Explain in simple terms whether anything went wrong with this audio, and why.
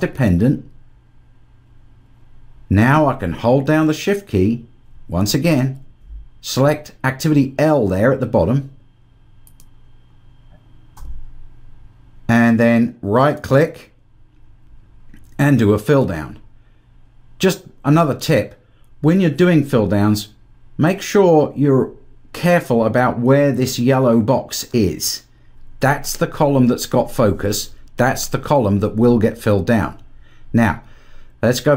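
Nothing went wrong; no faults can be heard.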